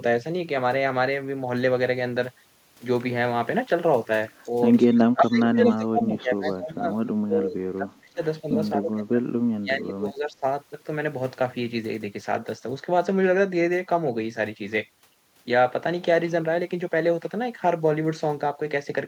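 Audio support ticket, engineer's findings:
Echo leak at 4.43–4.50, 5.25–5.29, 5.66–5.76, 6.47–6.51 s. Delayed copy of the speech, fixed 221 ms behind, about 35, 30, 5 and 25 dB below it. Likely far-end echo canceller passing loudspeaker pickup back. Constant lag distinguishes it from room reverb.

Speech suppressed in double talk at 4.88–8.20, 8.41–8.57, 8.76–9.24, 9.61–10.44 s. Speech level dips by roughly 5 to 30 dB while the other side talks. Likely echo canceller attenuating both talkers.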